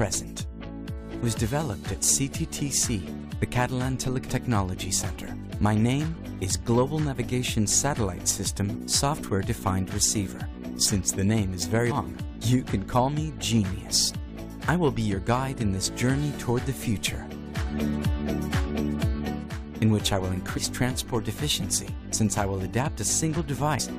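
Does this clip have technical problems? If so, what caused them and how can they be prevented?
Yes. Damaged data in the compressed stream causes three brief blips, at 11.90–11.92 s, 20.56–20.58 s and 23.79 s. At each point corrupted bytes make the decoder misread the frames, lose sync and hunt for the next valid frame header. This produces a short chirp, squawk, click or short hole that is foreign to the surrounding sound. On a spectrogram each appears as a thin vertical smear of broadband energy. On the waveform it is a jagged burst or discontinuity about 20 ms wide. To prevent it, transfer and store the file over checksummed, error-corrected paths and verify its integrity before decoding.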